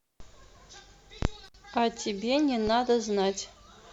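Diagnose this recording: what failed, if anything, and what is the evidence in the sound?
Intermittent contact in the analogue wiring: the speech drops out for about 58 ms within 1.45 to 1.55 s, showing a near-flat waveform gap bracketed by broadband crackle spikes on the spectrogram.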